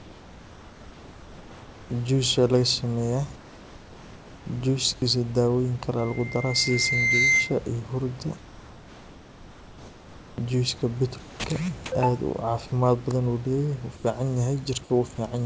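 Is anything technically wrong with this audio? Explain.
Yes. Three kinds of fault are audible in this speech clip, heard over a call path whose content stops at 8 kHz, as a wideband codec such as G.722 would produce.

Comfort noise in place of the background appears from 0.0 to 1.9 s, 3.36 to 4.46 s, 4.94 to 5.02 s, 8.38 to 10.38 s (just before "juice ka") and 13.96 to 14.04 s. The sender has likely stopped transmitting during pauses, and the receiver fills them with synthetic noise. The real room background becomes a flat, featureless hiss about 2 to 4 dB quieter. On a spectrogram these stretches are smooth, uniform bands with no fine texture, and on the waveform they form a slightly lower, even floor.

A loudspeaker feedback squeal runs from 5.99 to 7.60 s. The microphone picks up the loudspeaker it feeds, and at 2.1 kHz the loop gain exceeds one, so that tone keeps reinforcing itself. 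It swells over about a second and a half into a piercing whistle louder than the speech. A spectrogram shows a single bright horizontal line at 2.1 kHz that thickens as it grows, and the waveform envelope climbs steadily.

Sound dropped by the voice detector occurs from 11.20 to 11.44 s, between "juice ka" and "ka aad", and again from 15.16 to 15.18 s. The detector likely mistook part of the speech for background and stopped sending, so comfort noise replaced part of the sound. Roughly 90 ms of speech vanishes in the first gap and about 10 ms in the second, leaving a clipped, swallowed moment. On the waveform the speech envelope collapses abruptly to a low noise floor. On the spectrogram the speech harmonics cut off into flat noise.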